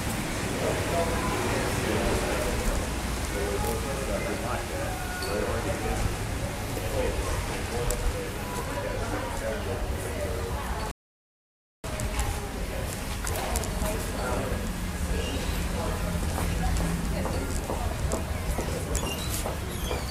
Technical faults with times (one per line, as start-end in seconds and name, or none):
10.91-11.84 rebuffering stall